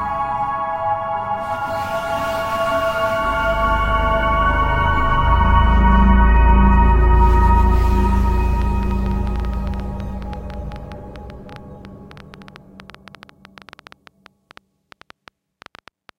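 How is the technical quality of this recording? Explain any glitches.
The recording has one clear problem in its second half: a train of clicks. From 8.62 s to 16.10 s there's an uneven ticking, about 8.3 clicks per second, around seventy in all. Each one is a short pulse of much the same shape, peaking roughly as loud as the sound itself, so they pop out over it and through the quieter gaps. That's likely interference from nearby equipment or a faulty connection or power supply, injecting a spike at irregular intervals.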